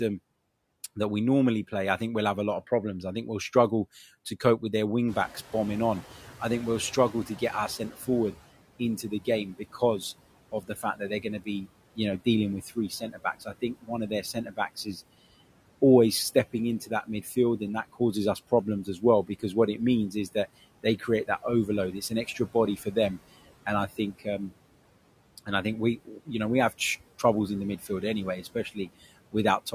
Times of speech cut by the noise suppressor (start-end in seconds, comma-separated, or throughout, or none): 7.13-8.08, 8.79-9.82, 10.52-14.96, 16.53-22.96, 23.66-24.51, 25.38-27.24